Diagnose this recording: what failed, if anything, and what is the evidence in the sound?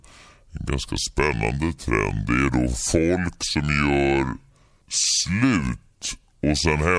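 The fault is a wrong sample rate at the playback stage. It runs through the whole clip. The speech is slow and low from start to finish, at about 0.69 times normal speed. Pitch drops by about 6.5 semitones, and the speaking rhythm stretches by the same ratio. Speed and pitch move together, and nothing is resampled. That fits audio recorded at 32 kHz being clocked out at 22 kHz.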